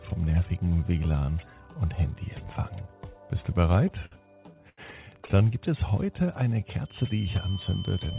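Packets reached this call-path audio late or more slowly than they were played out, so the jitter buffer ran dry repeatedly, producing repeated stalls (stutter) in two bursts. From 3.88 to 4.80 s there are eight gaps, the longest 81 ms, totalling 195 ms or about a fifth of that stretch. From 5.22 to 5.47 s there are five shorter gaps, none over 14 ms, totalling 53 ms. Each time, the receiver extended the last sound to cover the wait, so nothing is lost, but the audio hitches and drags. Shortly after, the buffer was low or had raised its target delay, and between 5.91 and 6.61 s a jitter buffer slow-down stretches the audio by repeating tiny slices of it, adding 78 ms and running at 90% speed. The pitch stays put while the sound is drawn out. From 6.82 s to the end, a feedback whistle sits at 3.1 kHz, around 20 dB below the main sound, a thin steady tone behind it. This is likely a loudspeaker-to-microphone loop held just short of howling, letting that one frequency ring on without building up. 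Throughout, nothing reaches above 4 kHz, which fits the narrowband G.711 mu-law codec at 64 kbps on the call path.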